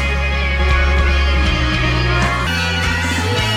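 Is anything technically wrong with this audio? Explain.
Yes, there are two faults.

From 0.59 s to 2.27 s there is a doubled audio track, likely from the signal being captured a second time through a slower path, or an edit leaving two copies out of step. A full-band copy runs about 300 ms behind the original at roughly the same level, with no decay or room colour. The sound sounds stuttered and smeared, like a dry slapback echo, and the copy starts and stops abruptly.

From 2.47 s to the end there is a section at the wrong speed, likely from that stretch being played against the wrong clock in an editor or player. It runs 1.39 times faster than recorded, so speed and pitch jump together the instant it begins. The sound turns hurried and about five semitones higher.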